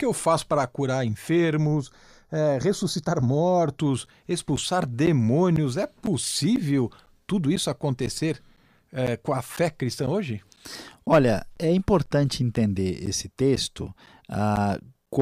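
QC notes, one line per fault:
1.66 to 3.78 s, channel delay (comb filtering): one channel lags by roughly 0.2 ms, so mono summing cuts notches from about 3 kHz upward, leaving the speech hollow rather than ticking.
4.06 to 15.07 s, periodic USB or driver dropouts: short gaps of silence around 10 ms every 0.5 s, heard as evenly spaced ticks that follow the signal, unlike random codec glitches.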